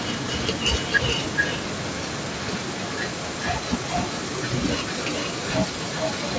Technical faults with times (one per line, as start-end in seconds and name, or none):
0.00-6.38 echo leak